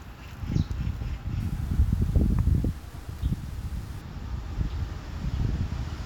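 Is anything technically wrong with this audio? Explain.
Yes. Low bit depth without dither from 1.40 to 4.01 s: grainy distortion tracks the sound, roughly 30 dB below it, likely from undithered truncation to about 7 bits.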